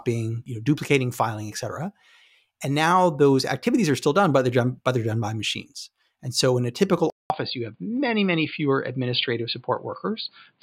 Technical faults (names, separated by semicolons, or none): input switched to a poorer device